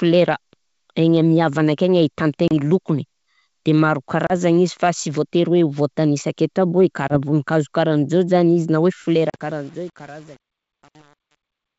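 At 2.48, 4.27, 7.08 and 9.30 s the speech drops into silent gaps of 30, 30, 20 and 40 ms. This is packet loss on an ADPCM call. The decoder's predictor loses track, so the speech resumes slightly distorted before settling.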